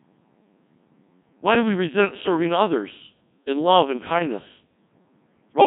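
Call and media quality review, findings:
Robotic, buzzy speech throughout, heavy damage. Codec 2 vocoder, fits a 1.6 kbit/s mode: sine-wave resynthesis from pitch and envelope. Spectrogram shows clean, rigid harmonic combs and smeared consonants.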